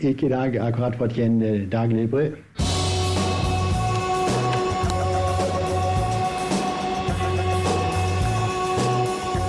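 A single sharp, loud click at 4.90 s is a file header played as audio: header bytes left in at a join between two pieces were read as samples. On a waveform it is a brief spike; a spectrogram shows a thin vertical broadband line.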